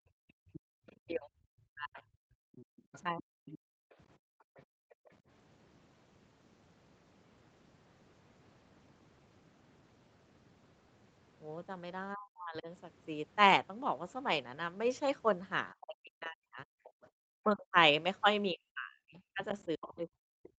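Right from the start, 0.0 to 5.0 s, the room sound keeps dipping, about 39 dB at worst and roughly two seconds in total: background gated by the echo canceller as it clamps the mic. Underneath, from 0.53 to 5.11 s, a faint second voice about 20 dB down comes through, likely the other side's voice leaking through past the canceller. Between 0.78 and 3.41 s the talker's speech itself drops out in pieces, around 40 dB deep for about a second overall, likely speech suppressed in double talk. The same thing hits again from 12.15 to 12.68 s, and then from 15.73 s to the end. From 16.84 to 20.49 s the leaked voice is back, louder this time at about 15 dB below the speech, and the background briefly gates out again, about 40 dB, from 16.9 to 17.13 s.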